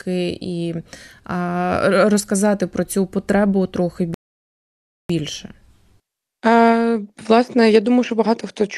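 At 4.14 s, just after "про цю потребу трохи", the speech drops into silence until 5.10 s, then carries on from exactly the point where it stopped. This is a rebuffering stall: playback used up its downloaded audio and waited for more, inserting about 0.95 s of dead air without losing anything. The waveform shows a flat line between two intact stretches, and the spectrogram shows a clean, empty vertical band across all frequencies.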